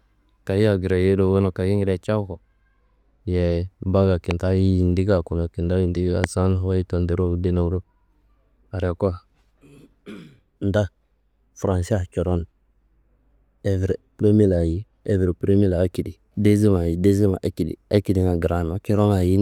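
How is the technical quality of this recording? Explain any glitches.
Two loud pops mar the speech, at 4.31 s and 6.24 s. Each is a single sharp click lasting about 20 ms, peaking well above the speech, which continues underneath. A sudden voltage pulse, likely from static or a switching glitch, was added to the signal.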